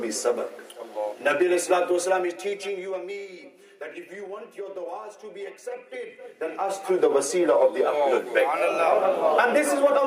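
No technical faults can be heard anywhere in the audio. The level changes that occur are smooth and gradual, as from a fader being moved.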